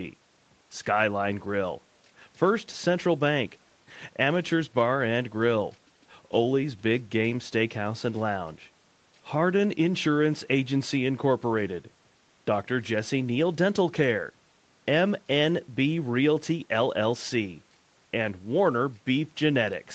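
No technical faults can be heard in this speech; the sound carries the usual character of a call path, with nothing above about 8 kHz.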